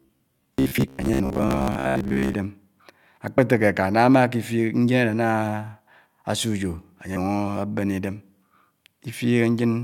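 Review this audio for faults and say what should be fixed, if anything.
From 0.02 to 2.35 s the sound turns into a rigid, metallic buzz near 66.7 Hz that only loosely tracks the speech. The likely cause is robotic sound from repeated short buffers: late audio is covered by replaying a roughly 15 ms chunk, with about half the material repeated instead of new. Deeper jitter buffering or steadier audio delivery would prevent it.

Brief glitches sound at 0.77, 3.37 and 7.15 s. This is damaged data in a compressed stream: corrupted bytes make the decoder misread frames and resynchronise at the next header. Checksummed, error-protected transport or storage would prevent it.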